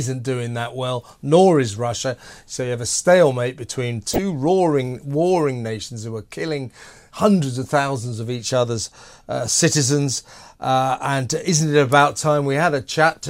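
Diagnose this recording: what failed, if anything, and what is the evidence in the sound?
Weak DAB reception let bit errors corrupt the MP2 audio, causing DAB burbling: short blips of noise in single sub-bands at 4.13–4.18 s, after "have a stalemate between", and 7.64 s.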